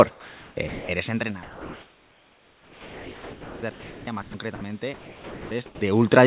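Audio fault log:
0.11–0.56, 0.68–0.89, 1.43–3.62, 3.71–4.07, 4.22–4.34, 4.55–4.61, 4.94–5.51 and 5.66–5.81 s, sound dropped by the voice detector: speech gives way to steady comfort noise. This is likely because the sender's detector misjudged quieter speech as background and stopped transmitting. The longest gap runs about 2.2 s.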